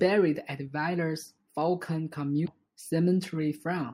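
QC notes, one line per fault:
2.44–2.48 s: damaged data in a compressed stream. A brief glitch cuts into the speech for about 40 ms, where corrupted bytes made the decoder misread frames and hunt for the next header. The waveform shows an abrupt discontinuity.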